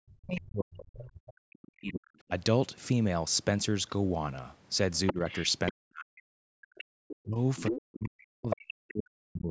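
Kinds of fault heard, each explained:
Speech suppressed in double talk: the speech dips by about 40 dB during overlapping talk, around 0.05–2.31 s, 5.12–6.54 s and 7.25 s to the end, likely echo-canceller ducking.
Other side's voice leaking through: a second voice is heard, faintly at about 20 dB down near 0.4 s, then only about 5 dB below the speech at 4.95–5.72 s and 6.75–8.56 s, likely uncancelled loudspeaker echo.
Background gated by the echo canceller: the room sound drops by about 40 dB for roughly 150 ms, 6.84–6.97 s, as the canceller clamps the microphone during loudspeaker playback.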